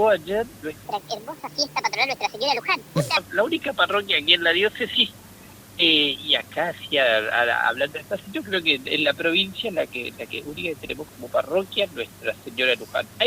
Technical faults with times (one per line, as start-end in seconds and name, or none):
0.85-3.17 wrong sample rate